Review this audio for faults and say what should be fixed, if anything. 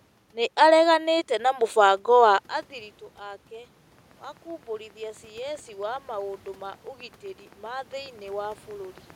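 A train of clicks runs from 3.99 s to 9.11 s, about 40 evenly spaced pops at 7.6 per second, peaking near the level of the speech and audible in pauses too. Interference or a struggling interface is the likely source. A spectrogram shows thin vertical broadband lines at regular spacing. Check grounding, cabling and the interface, and move the recording chain away from nearby equipment.

Automatic gain rising occurs from 4.97 s to 6.89 s. After the input fell by about 16 dB, the gain control slowly added about 3 dB, so the voice and the room noise swell together. The waveform envelope widens gradually over that span, including the noise floor between phrases. Set a fixed manual gain, or slow and limit the automatic gain control, so it doesn't chase level changes.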